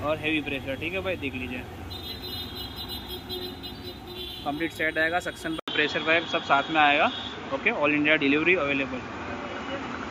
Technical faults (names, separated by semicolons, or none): input switched to a poorer device